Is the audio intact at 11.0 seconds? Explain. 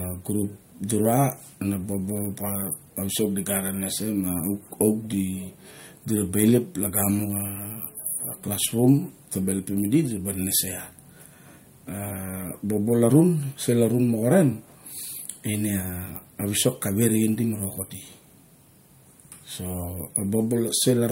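Yes, at 11.0 seconds the speech runs on cleanly, with no dropout, click, distortion or other fault to be heard at that moment.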